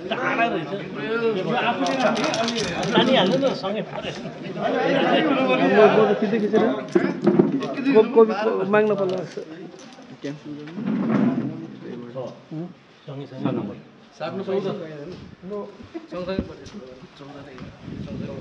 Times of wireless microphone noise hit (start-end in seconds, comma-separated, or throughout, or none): none